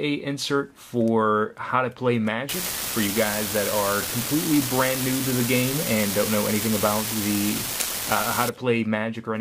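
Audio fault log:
2.49–8.49 s, unreliable data bit: a steady crackly fizz sits on the sound for these six seconds and carries on right through the quiet gaps. One data line is flaky, so random samples get the same fixed jump of about -15 dBFS.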